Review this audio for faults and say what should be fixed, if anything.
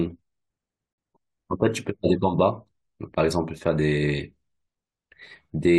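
Separately encoded pieces were joined untrimmed, so encoder delay and padding leave a gap at a join of encoded pieces: 49 ms of silence, 0.93 to 0.98 s, breaking the speech. To prevent it, encode the audio as one continuous stream, or trim each piece's encoder delay and padding before joining.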